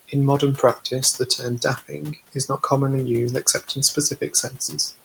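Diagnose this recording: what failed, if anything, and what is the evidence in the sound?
Noise suppressor artifacts in the call processing stage run through the whole clip. The room noise sits about 20 dB below the speech, and it is pulled down by about 17 dB in the pauses, then swells back under the speech. Unlike a codec's artefacts, the effect rises and falls with speech activity.

Speech cut by the noise suppressor, also in call processing, occurs twice. From 1.78 to 2.61 s, just before "commonly used", about 200 ms of speech dips by up to about 16 dB. At 4.5–4.73 s, roughly 100 ms drops about 9 dB. The suppressor mistook quiet speech for noise, so those sounds come out faint and swallowed rather than silent. Because the background falls along with them, these are suppressor decisions, not packet dropouts.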